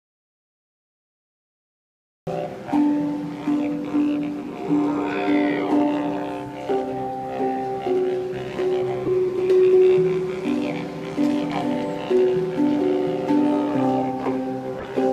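The input was most likely lost or muted while the recorder kept writing silence, an audio dropout to silence already under way when the clip begins. From 0 to 2.27 s there is dead silence with no room tone, and the sound then starts abruptly.

A corrupt frame decoded appears at 9.05 to 9.08 s, where flipped bits in a few compressed frames were played anyway. Misread gains and codes scatter energy into the wrong frequencies, giving a brief glitch. A second one, spanning a couple of frames, follows at 14.79 to 14.84 s.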